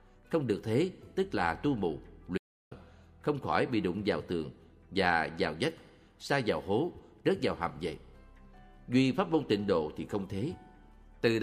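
At 2.38 s the sound cuts to dead silence for 0.34 s, with no room tone, until 2.71 s: an audio dropout to silence, likely from lost input.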